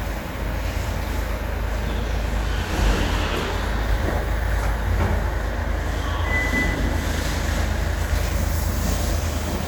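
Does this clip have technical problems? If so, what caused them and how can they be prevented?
No, there are no technical problems to hear in this recording of sounds. Nothing here needs a cause traced or a fix.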